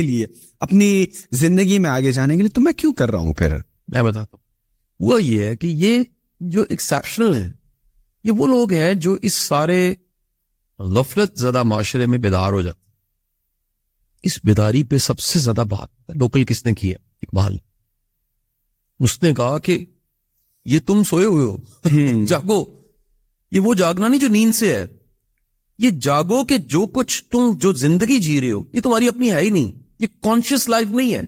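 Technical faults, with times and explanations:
No technical faults are audible anywhere in this speech recording.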